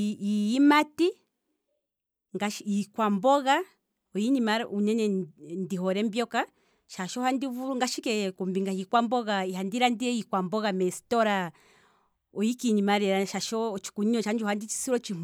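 Listening through this speech recording, nothing technical stood out.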